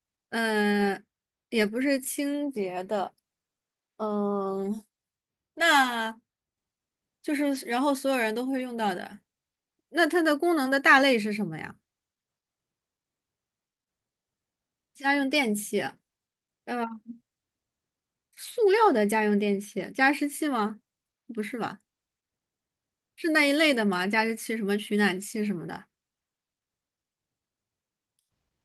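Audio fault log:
No faults detected anywhere in this speech recording.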